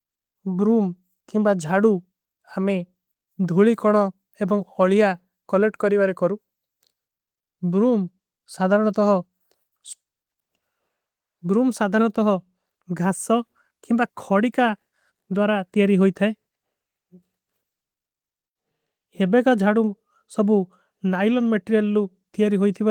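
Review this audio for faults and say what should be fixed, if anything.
Nothing to fix: the speech, carried over Opus at 24 kbps in hybrid mode with full bandwidth, shows no faults needing attention.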